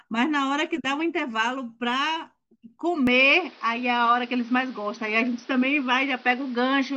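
At 3.07 s the speech abruptly turns duller and boxier and stays that way to the end. Everything above 6 kHz is gone, the level shifts by about 5 dB, and faint new background noise appears well below the voice. There's no gap at the changeover. That all points to the input likely having switched to a poorer device partway through, a narrower-band mic with its own tone and noise.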